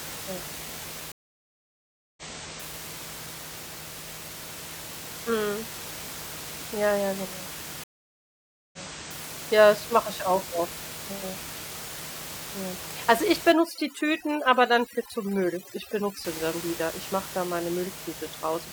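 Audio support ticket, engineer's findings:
Stream reconnect at 1.12–2.74 s and 7.84–9.25 s (second right after "ja genau"): dropout of 1.05 s and 0.89 s, then playback restarts about 0.56 s and 0.51 s earlier, replaying material. Connection loss, fresh decoder, server resending a backlog burst.

Overdone noise removal, 13.52–16.25 s, ending just before "sie dann wieder": background drops, breaking into twinkling specks. Denoiser set too aggressive, gating bands near its noise estimate and taking quiet speech components with them. Room noise audible about 12 dB under speech.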